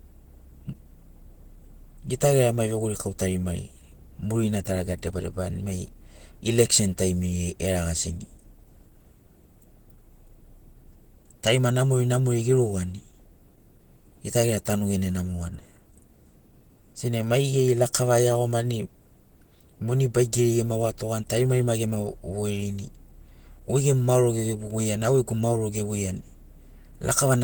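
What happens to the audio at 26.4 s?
At 26.4 s, as throughout the clip, the speech sounds hoarse and grainy rather than swirly, from likely Opus compression at about 16 kbps in its hybrid speech mode.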